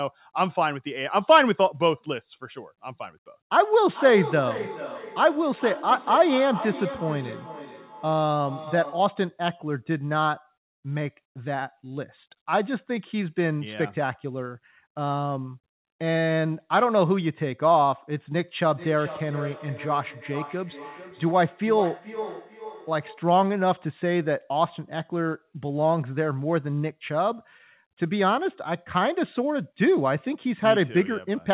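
From 3.9 to 9.2 s, and again from 18.7 to 23.4 s, the speech comes back roughly every 0.4 seconds, thinner and more ringing each pass, peaking about 11 dB and then about 14 dB below the voice. This is feedback echo between two devices: one device plays the other's sent audio, that microphone recaptures it, and neither echo canceller removes sound it did not play itself. Throughout, the sound stops at 4 kHz, which fits narrowband G.711 call coding.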